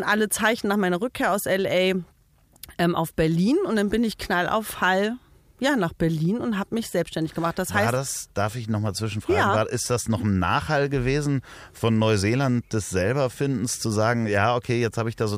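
No audible technical faults anywhere in this recording.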